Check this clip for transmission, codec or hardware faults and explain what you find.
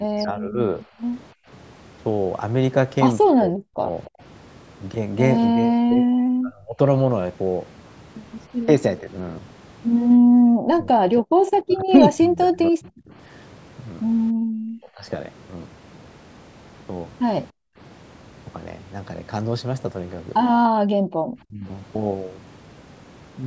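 There are three echo-canceller problems here, all from a call where the far end plays through a loudspeaker. The band stops at 8 kHz, as you'd expect from call microphone processing.

Speech suppressed in double talk: from the start to 15.06 s, and again from 21.44 to 21.66 s, the speech dips in pieces, around 40 dB at worst early on and around 30 dB later. That's likely the canceller mistaking both sides talking for its own echo and turning everything down.

Background gated by the echo canceller: the room sound drops out briefly at 0.88 to 1.48 s, 10.18 to 10.35 s and 14.32 to 14.44 s, by about 30 to 39 dB. From 17.51 to 21.16 s it drops on and off, down to about 40 dB. The canceller clamps the mic while the loudspeaker plays, then releases.

Echo leak: at 4.05 to 4.1 s there's a faint scrap of delayed voice, 289 ms behind and around 25 dB under the speech. It's likely residual loudspeaker sound that the canceller didn't fully remove and sent back down the line.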